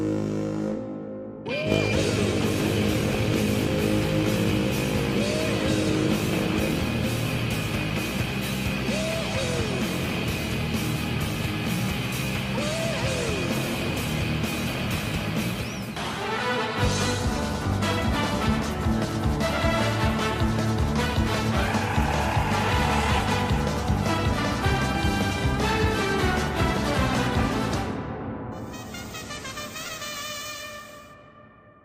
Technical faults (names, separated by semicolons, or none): DAB burbling